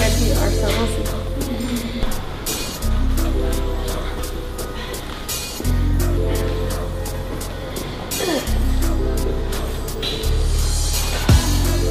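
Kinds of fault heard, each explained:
No technical faults can be heard anywhere in the signal.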